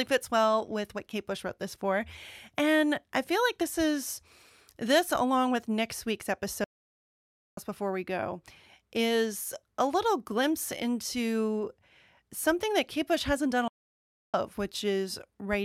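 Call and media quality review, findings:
Playback stall at 6.64–7.57 s after "along with next week's" and 13.68–14.34 s after "hasn't done": output silent 0.93 s and 0.66 s, likely buffer underrun or blocked player thread.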